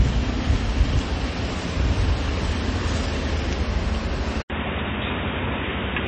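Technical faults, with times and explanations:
Throughout, MP3 compression: the treble stops dead at 8.3 kHz, and the upper detail has a watery, swirling quality with smeared attacks. This is likely a low-bitrate MP3 encode, which fits something around 32 kbps. The encoder discards everything above a fixed cut-off and zeroes weak frequency lines that flicker on and off between frames. That flicker is what separates it from a simple low-pass filter, which would dull the sound without the swirl.
4.42 to 6.07 s, input switched to a poorer device: after a gap of about 80 ms, the sound turns narrow and boxy, with nothing above 3.8 kHz, and new background noise sits roughly 40 dB under the signal until the end. The loudness stays about the same. This points to the input likely having moved to a lesser microphone or headset call profile. The brief silence and the changed noise floor set it apart from a codec simply lowering its bandwidth.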